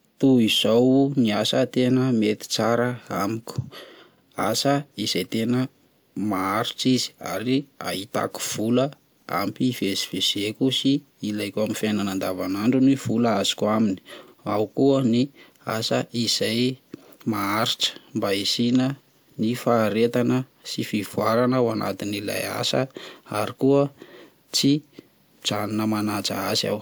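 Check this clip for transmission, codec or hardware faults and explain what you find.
The speech has one fault: overlapping chunks. Brief stutters occur at 4.18, 9.23, 14.28, 19.33 and 24.38 s. The audio was handled in 5-second chunks, each starting before the last ended. About 50 ms plays twice at every join, heard as a regular click-like stutter.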